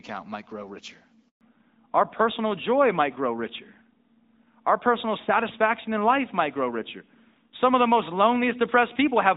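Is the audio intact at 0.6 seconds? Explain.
Yes, the audio is intact at 0.6 seconds, with no fault there beyond the light coding character of the AMR wideband (HD Voice) path running at 12.65 kbit/s.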